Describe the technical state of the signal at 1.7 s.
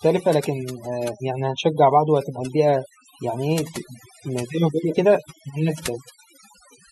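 At 1.7 s the speech carries overdone noise removal, which runs through the whole clip rather than starting or stopping there. An aggressive noise reducer pulls individual frequency bands down to near nothing wherever they sit close to its noise estimate, taking quieter parts of the voice with them. The background collapses into near silence dotted with twinkling specks. A spectrogram shows a blank floor scattered with isolated bright pixels and ragged, patchy harmonics.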